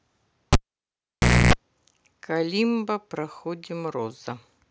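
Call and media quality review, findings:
Cable pulled and plugged in, 0.53 to 1.53 s. Pop at disconnect, then about 0.96 s near silence. Then 0.29 s burst of 60 Hz mains buzz: jack tip contacting before the sleeve ground seats, leaving an unshielded live input. Second pop as the speech signal restores. Probable component: input cable or connector, physically unseated and reinserted. Check jack seating and strain relief.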